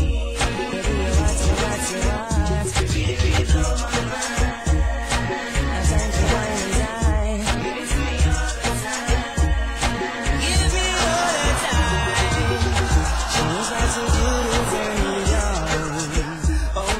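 Nothing in this one trips the ear as a technical fault, so there's nothing to point to at any moment along the way.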